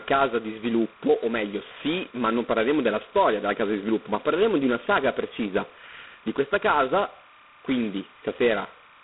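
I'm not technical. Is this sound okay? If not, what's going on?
No. Timecode bleed runs through the whole clip: a faint, steady chirping warble behind the speech. A timing signal used to sync equipment, flipping between two pitches around 1 and 2 kHz, has leaked in from a nearby cable or track.

G.726 ADPCM coding, the kind of compression used on some cordless and digital phone lines, also affects the entire clip. It saves data by sending rough guesses of how the sound changes, leaving a harsh, rasping hiss that swells and fades with the speech. Everything above about 3.8 kHz is gone, giving a muffled telephone sound. The heavy damage points to one of the lowest-quality settings.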